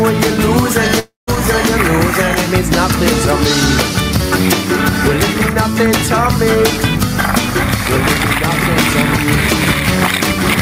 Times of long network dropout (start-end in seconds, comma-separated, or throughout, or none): 0.99-1.30